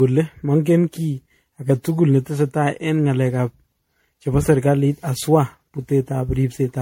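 From start to finish the speech carries the marks of generation loss, most likely from about ten successive MP3 encode and decode passes at a rate that fits 64 kbit/s. Each pass requantises on a shifted frame grid, so the errors stack: the sound is swirly and hollow, with smeared consonant attacks and more spectral holes than a single encode would leave. Nothing is present above 16.5 kHz.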